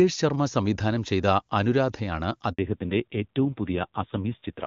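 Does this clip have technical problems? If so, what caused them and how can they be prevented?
Yes. At 2.53 s there is a handover gap: the call switched networks and no speech frames arrived for about 60 ms, until 2.59 s. Unlike packet-loss concealment, which smears or repeats sound, this is a clean drop to silence, and the audio quality changes immediately afterwards. Keeping the call on one network, or using make-before-break handover, prevents it.

From 2.59 s to the end there is a fallback to narrowband. Before the handover the sound has full HD Voice bandwidth. Afterwards nothing remains above 4 kHz, and the texture turns rougher, which points to a low AMR narrowband rate around 5.9 kbit/s. That added coarseness is what separates a codec fallback from a simple low-pass filter. Making sure both networks support AMR-WB end to end prevents it.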